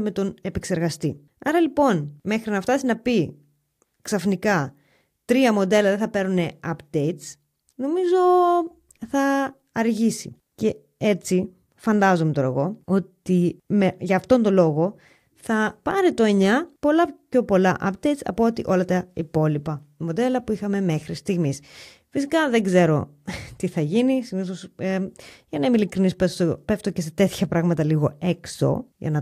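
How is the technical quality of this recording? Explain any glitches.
One glitch is audible in the speech. A block of digital silence at 15.91 s: for about 1.2 ms the sound drops out and returns with no fade. The abrupt edges of so short a gap make it sound like a tick or dip rather than a hole.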